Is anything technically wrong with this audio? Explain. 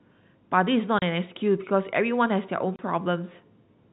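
Yes. There is packet loss filled with silence, at 0.99 to 1.02 s and 2.76 to 2.79 s. Each 30 ms hole fits one lost packet that the receiver replaced with silence. The speech drops out abruptly, with hard edges, over the band-limited G.711 telephone sound.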